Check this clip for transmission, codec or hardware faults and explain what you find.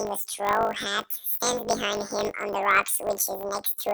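There's one fault here, running through the whole clip: planar audio read as interleaved. Each 20 ms block of left-then-right samples gets played as alternating pairs, so the speech turns into a robotic 50 Hz buzz without a clear octave jump.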